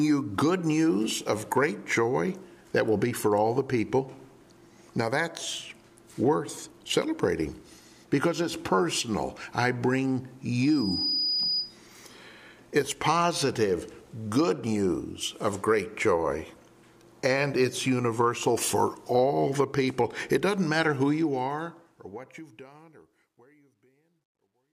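From 10.60 s to 11.79 s there is loudspeaker feedback squeal. A single tone near 4.9 kHz swells up over roughly half a second. It reaches about the same level as the rest of the sound. The microphone is hearing the loudspeaker it drives. At that one frequency the loop gives back more than it takes in, so the tone feeds itself. It holds as a piercing whistle until it stops at 11.79 s.

The fade-out begins near 21 s and runs to the end at 24.73 s. It has truncation distortion. The level drops smoothly at first, but the fade stage keeps too few bits and adds no dither. The quiet tail fits a 12-bit path. Near the smallest steps the waveform turns coarse and square. From 23.06 s to 24.73 s the sound goes gritty.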